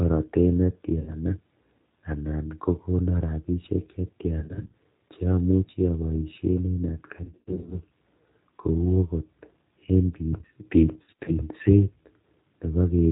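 The whole clip is G.729 coded speech at 8 kbit/s, so nothing above 4 kHz survives. The voice is rebuilt from a vocal tract filter and a sparse pulse excitation, which gives it that plainly audible rough, slightly synthetic edge.

There's VoIP packet loss concealed by the speech codec at 0.99–1.17 s, 4.39–4.72 s, 7.24–7.80 s and 11.03–11.31 s. The decoder stretches its last pitch and filter into a buzzy tone or coloured noise that fades, and the voice stays weak for a bit afterward. The third burst is worst, with gaps scattered over roughly half a second.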